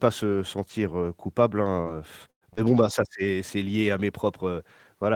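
At 2.30 s the speech breaks up in a burst of packet loss that runs to 2.44 s. About 120 ms of audio never arrived, and the receiver bridged the hole by continuing the last sound for roughly 111 ms while turning it down. Part of the stretch decays into near silence. It is heard as a held buzz or hiss that fades out. The speech then picks up further along, and the missing section is simply skipped.

Shortly after, from 2.53 to 2.60 s and just before "bon bah ça c'est", a short concealed packet loss follows. About 40 ms failed to reach the decoder in time. Roughly 38 ms was synthesised by extending the preceding sound, following its pitch where it was voiced and using shaped noise where it was not, then blending back into the real signal. The result is a brief smear or wobble rather than a clean gap, and a short consonant in that spot can drop out.

Inside that same window, at 2.57 to 2.59 s and again just ahead of "bon bah ça c'est", a lost packet was rebuilt from error correction. 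The following packet carried a low-bitrate redundant copy of the missing 20 ms, and the Opus decoder played that copy instead of leaving a hole. There is no dropout here. Instead, the 20 ms frame comes out coarser and noisier than the frames around it, adding a brief grainy texture on top of the surrounding concealment.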